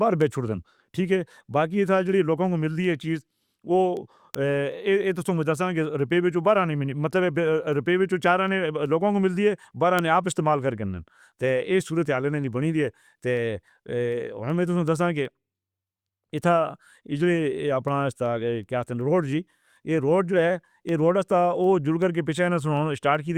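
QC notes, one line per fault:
0.21–23.15 s, word clock ticks: around seventy sharp ticks of uneven strength, roughly every 0.4 s, as an unlocked receiver's clock drifts by roughly 70 ppm and drops or repeats one sample at each slip. The steady rate, independent of the speech, distinguishes them from random clicks or dropouts.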